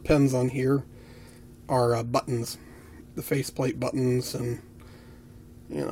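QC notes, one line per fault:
Throughout, sample clock jitter: an unsteady converter clock, wandering by a few microseconds, shifts each sample's timing. The resulting hiss sits about 30 dB below the sound and rises with loud, bright passages. Unlike a fixed noise floor, it disappears in silence.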